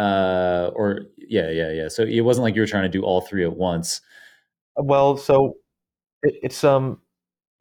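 Nothing in this speech recording points to a technical fault, and the signal stays continuous throughout.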